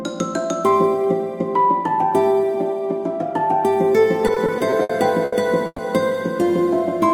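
From 4.27 to 5.80 s the music shows repeated stalls (stutter): packets arrived late or slower than playback, so the jitter buffer kept running dry. Eight times in that span the receiver stretched the last sound to bridge the wait, adding about 350 ms in total, with the longest hold 120 ms and nearly a quarter of the passage concealed. Nothing is lost, but the music hitches and drags.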